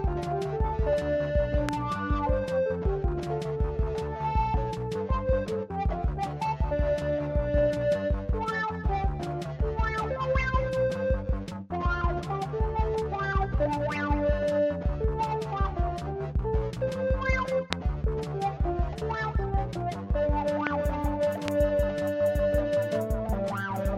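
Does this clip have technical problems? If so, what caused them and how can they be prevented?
Yes. Four loud pops crack through the sound at 1.69–1.71 s, 17.73–17.75 s, 20.67–20.69 s and 21.48–21.50 s. Each is a single pop about 20 to 25 dB above the audio, which continues underneath. They are likely voltage spikes from a switch, plug or static discharge entering the signal path. To prevent them, secure all connectors, avoid switching or plugging equipment while recording, and ground the setup properly.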